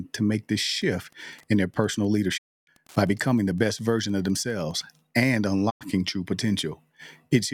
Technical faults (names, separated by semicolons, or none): Wi-Fi interference; digital broadcast dropout